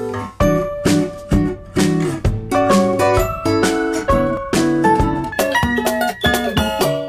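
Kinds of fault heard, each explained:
Section at the wrong speed: From 5.32 s to the end at 7.08 s, the audio plays at about 1.95 times its proper speed. Pitch and tempo jump together at that moment. Everything sounds close to ten semitones higher and noticeably rushed. Nothing is lost or cut out; the same material simply runs through too quickly. The likely cause is an editor or player fitting that stretch to the wrong clock rate.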